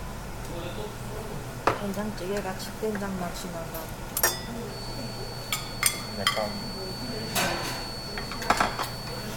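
A recording of everyday sounds, with two faults. At 0.32 to 0.34 s, Bluetooth LE Audio frames were lost, a gap of about 15 ms that fits two 7.5 ms frames. The LC3 decoder bridged it by repeating the last spectrum with scrambled phase, leaving a brief noisy smear. From 4.62 s to the end, the loudspeaker-to-microphone loop likely sat right at the edge of feedback, producing a feedback whistle: a thin, steady 4.5 kHz tone, about 10 dB below the main sound, swelling and fading slowly in level.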